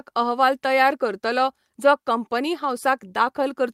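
No technical faults can be heard in the recording. The speech carries on without any audible problem from one moment to the next.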